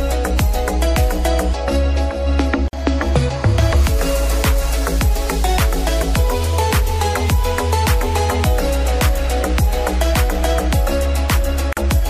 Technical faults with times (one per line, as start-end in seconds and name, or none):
2.68-2.73 gap at a join of encoded pieces
11.73-11.77 gap at a join of encoded pieces